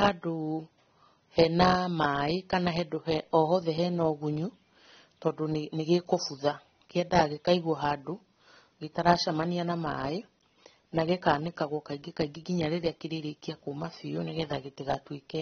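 Heavy lossy encoding, likely AAC compression of the AAC-LC kind, runs through the recording, and the damage fits a bitrate near 24 kbps. Nothing survives above 6.3 kHz, so the speech sounds dull and smeared, with a warbling, fizzy edge on sibilants.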